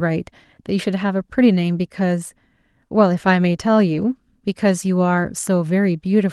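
From 3.93 s to 4.03 s the speech turns briefly rougher and grainier, with no dropout: a lost packet rebuilt from error correction. About 60 ms of audio was restored from low-bitrate copies carried in the following packets, which fits three separate lost packets. Opus in-band forward error correction filled the gap, so continuity holds while detail and clarity drop. The call path's Opus coding, band-limited near 12 kHz, sets the tone around it.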